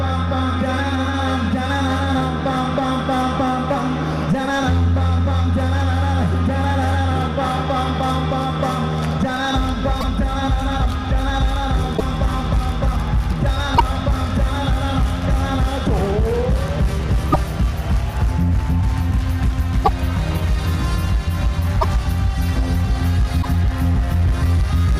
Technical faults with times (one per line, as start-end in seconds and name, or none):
10.00-10.04 broken MP3 bit reservoir
11.96-12.01 broken MP3 bit reservoir
13.77-13.80 broken MP3 bit reservoir
17.32-17.36 broken MP3 bit reservoir
19.84-19.89 broken MP3 bit reservoir
21.80-21.84 broken MP3 bit reservoir
23.41-23.45 broken MP3 bit reservoir